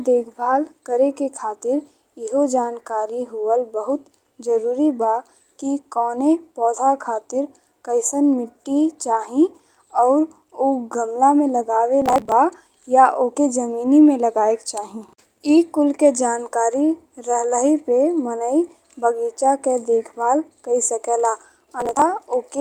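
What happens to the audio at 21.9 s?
Processor overload crackle runs 21.80–22.02 s, after "के देखभाल कइ सकेला": many roughly 10 ms buffers are skipped, giving gritty tearing, with hard-edged waveform gaps and broadband vertical spectrogram streaks.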